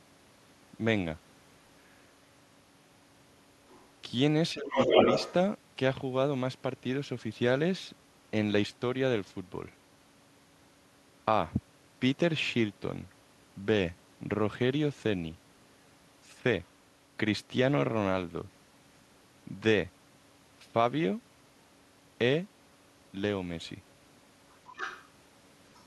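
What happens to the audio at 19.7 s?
Nothing goes wrong at 19.7 s; the speech there plays through intact, with no dropout, click, distortion or other fault.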